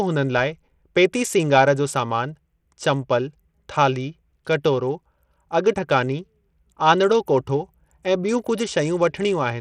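From start to finish the speech carries plainly audible codec damage, most likely Bluetooth SBC compression at a starved setting, which fits a bitrate near 80 kbps. SBC splits the signal into a few wide sub-bands and shares bits without any model of hearing, so at this rate the weak upper bands get almost nothing. The treble thins out and flickers in and out, while a gritty, grainy noise with aliasing sits on the sound.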